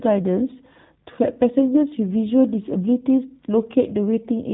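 Throughout, the speech carries G.729 codec damage. Nothing passes above 3.8 kHz, and the rough, synthetic texture of rebuilt pulse excitation fits an 8 kbit/s stream.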